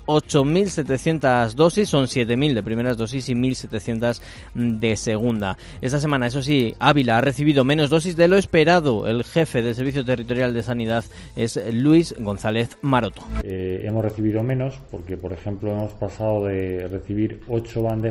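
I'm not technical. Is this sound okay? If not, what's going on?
No. The resampler restarted on every block: the audio was converted to a higher sample rate one tenth of a second at a time, with each piece handled separately. Every seam leaves a small flaw, heard as a steady ticking about ten times a second throughout, whenever sound is present.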